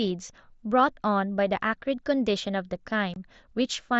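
At 3.14 to 3.16 s the speech drops out for about 22.5 ms, unconcealed Bluetooth headset packet loss over the mSBC link. The length fits three lost 7.5 ms packets, replaced by silence or an idle pattern. Unlike concealed loss, nothing fills the hole, so its edges cut off abruptly.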